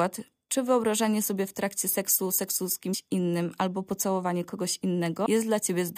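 A brief glitch cuts into the speech at 2.93 s, and a second, longer one follows from 5.23 to 5.26 s. Both come from damaged data in the compressed stream: bytes in those stretches were corrupted, so the decoder misread the affected frames, briefly produced garbage, lost sync and had to hunt for the next valid frame header before clean audio resumed.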